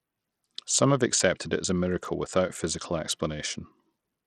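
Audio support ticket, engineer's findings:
Likely Bluetooth SBC compression on the link, running at a low bit pool; the grit and treble loss fit a bitrate around 80 kbps. Too few bits for the upper sub-bands, so they starve and flicker out while lower bands get coarse quantisation. Symptom: throughout the speech, plainly audible, with dull, unstable highs, gritty noise on the sound, and aliasing riding on it.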